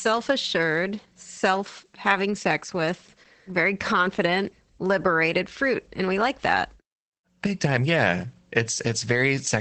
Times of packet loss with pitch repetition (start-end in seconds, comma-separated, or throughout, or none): none